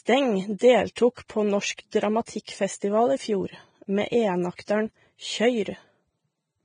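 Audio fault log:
throughout: Vorbis compression, heavy; treble cut off above about 9.7 kHz and remaining detail coarsely quantised into grainy hiss, likely from low-bitrate encoding near 22 kbps.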